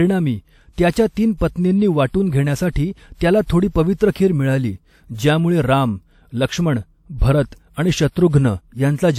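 At 7.18 to 7.22 s there is pre-echo: a transform codec spread the quantisation noise meant for a sharp speech onset across its whole block, so about 39 ms of hiss leads into the attack, which lands softened and smeared.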